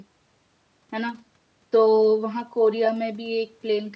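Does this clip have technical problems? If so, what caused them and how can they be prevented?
No, nothing here counts as a technical problem; the speech has simply passed through a call's microphone processing, which trims the deepest bass and leaves nothing above 8 kHz, and that's just how call audio normally sounds.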